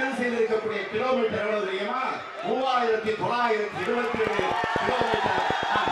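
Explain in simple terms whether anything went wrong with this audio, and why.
Something does go wrong near the end. From 4.15 s to 5.89 s a train of clicks runs over the sound: about fifteen short, near-identical ticks, evenly spaced at roughly eight per second. They are loud enough to stand out clearly above the audio. A steady, repeating pulse like this is likely electrical interference from nearby equipment or a faulty connection or power supply, rather than anything in the original sound.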